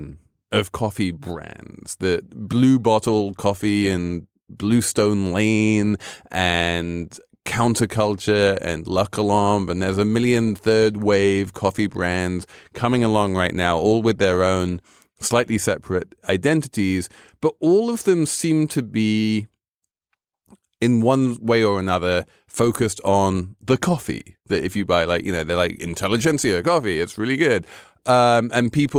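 No technical faults can be heard in the recording. At no point does anything in the speech signal point to a problem in how it was captured or carried.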